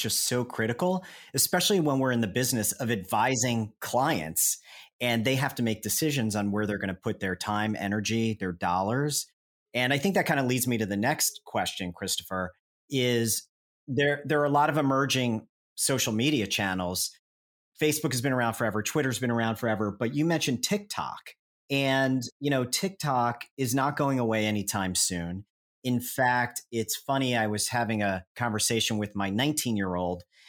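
The speech clip has nothing technically wrong with it.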